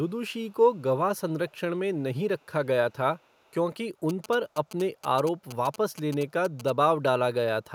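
Speech, with faint delayed copies of the voice surfacing at 0.28–0.54, 0.73–0.82, 1.49–1.6, 1.95–2.02, 2.38–2.47 and 3.19–3.54 s, about 40 dB down (about 35 dB at 1.49 s) and trailing by 426 ms, most likely an echo leak from a far-end loudspeaker its canceller missed. From 4.09 to 6.70 s a galloping pattern of ticks and 217 Hz buzzing sits about 15 dB below the signal: GSM signalling bursts from a nearby 2G phone, rectified by the audio circuit.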